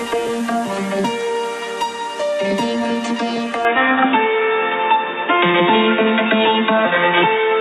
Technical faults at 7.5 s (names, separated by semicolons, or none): input switched to a poorer device